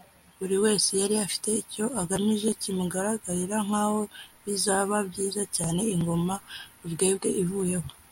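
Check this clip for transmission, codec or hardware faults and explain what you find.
Nothing in the speech stood out as a fault on listening.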